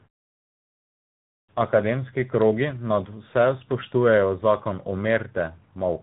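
Tandem speech coding runs throughout the speech, from start to end: decoded from AMR-NB at 7.95 kbit/s, carried as G.711, then recoded as G.726 at 40 kbit/s. The second coder compounds the first's damage, leaving rough, warbly, muffled speech with nothing above 3.8 kHz, while pauses mute cleanly.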